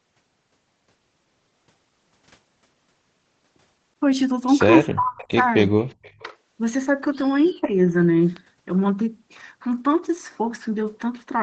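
Speech suppressed in double talk hits this speech clip at 4.87–5.43 s, 5.70–5.89 s and 7.55–7.71 s. The voice dips by about 30 dB, about 40 dB, and then only about 5 dB, likely because an echo canceller mistook overlapping talk for loudspeaker echo and turned everything down. Echo leak shows at 5.18–5.31 s, 5.79–5.86 s and 6.03–6.23 s as faint scraps of a copy delayed by 392 ms, about 25, 35 and 30 dB below the speech, likely where the canceller let some of the loudspeaker pickup through.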